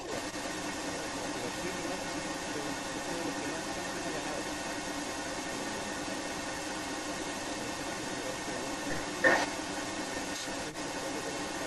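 Echo leak runs through the whole clip, from 0.00 to 11.66 s: a delayed copy of the speech trails it by about 0.33 s, sitting roughly 5 dB louder than the speech itself. The likely cause is a far-end loudspeaker whose echo canceller failed to suppress its microphone pickup.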